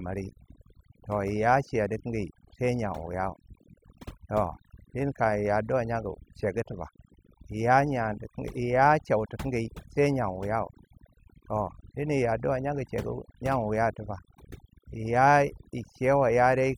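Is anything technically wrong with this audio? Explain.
Yes. The speech clip shows overdone noise removal from start to finish. A noise reduction process was pushed too hard on a noisy recording. Whenever a frequency band falls close to the estimated noise floor, it is pulled far down or cut out entirely. Quieter parts of the voice fall below that threshold and get removed along with the noise. The background drops and breaks up into twinkling specks.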